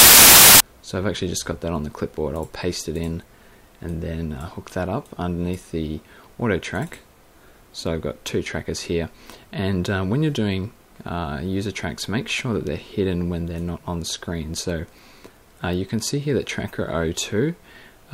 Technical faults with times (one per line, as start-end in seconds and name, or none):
0.00-0.60 file tags played as audio